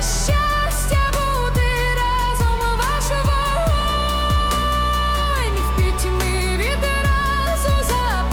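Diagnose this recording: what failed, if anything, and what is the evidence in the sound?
Nothing failed: no stage in the chain, from wiring and conversion through buffering, processing, network, storage and playback, leaves any audible evidence of a fault.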